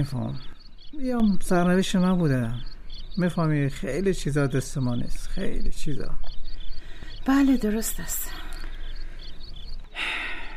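From 0.53 to 1.20 s, and again from 9.84 s to the end, the level abruptly sags by about 6 dB, likely one channel dropping out before the mono sum.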